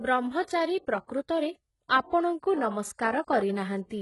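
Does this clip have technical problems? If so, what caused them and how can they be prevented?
Yes, the whole clip has gritty, lispy sibilants and a synthetic treble ending at 11.5 kHz, likely from heavy HE-AAC compression at a bitrate near 12 kbps. Replicated high bands don't match the real ones. Encoding at a higher bitrate, or with plain AAC, would keep the treble real.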